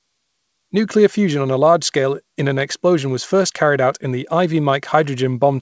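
The sender's clock runs roughly 3% slower than the receiver's, a clock drift between sender and receiver that persists through the whole clip. Fed too little audio, the jitter buffer keeps draining, so the speech never quite holds a steady pace.

From 0.18 s to 5.32 s, repeated timing corrections follow from that drift: the receiver keeps repeating short slices to cover the shortfall, stretching the speech to about 97% speed and adding roughly 150 ms overall. Each is small, heard if at all as slight, unevenly spaced hiccups and an unsteady tempo. Over the G.722 call path, the audio also stops at 8 kHz.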